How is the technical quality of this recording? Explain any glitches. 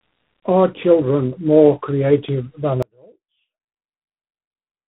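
The quality is poor, with two faults. Throughout, tandem speech coding leaves the speech rough, muffled and warbly. Nothing reaches above 3.8 kHz. The sound points to an AMR-NB link feeding a G.726 link, with each coder degrading the last one's output.

From 2.83 s to the end, there is an audio dropout to a faint residue. The speech cuts off abruptly. Only a faint trace remains, about 35 dB down. The likely cause is a lost signal while the path after the break stayed live.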